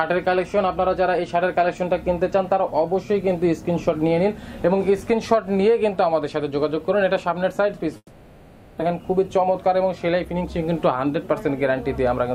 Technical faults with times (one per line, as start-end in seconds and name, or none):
7.97-8.82 long network dropout
8.90-11.33 jitter buffer speed-up